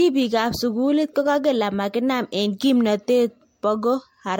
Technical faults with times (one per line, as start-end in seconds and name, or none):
0.00-4.40 generation loss